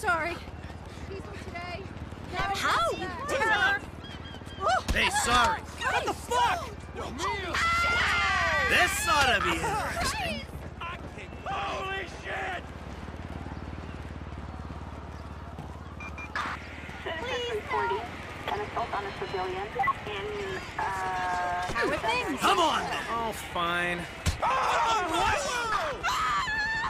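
At 2.81 s the zero line of the waveform jumps: a DC step of about -35 dBFS appears, as if a converter recalibrated or an offset-carrying input was switched into the path. The offset doesn't hold but bleeds away through a high-pass around 5 Hz, so it sags back toward zero over a fraction of a second. That sudden shift is heard as a single low thump under the sound, which itself carries on unchanged.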